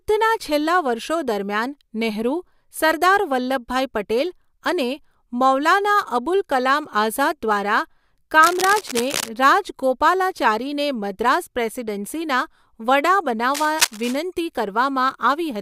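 At 8.43 to 9.29 s and again at 13.54 to 14.15 s, dense, ragged scratching rides over the speech, the second burst louder, nearly as loud as the voice. This is cable scratch noise, likely from a worn connector flexing. Unlike steady hiss or isolated clicks, it comes in irregular clustered bursts.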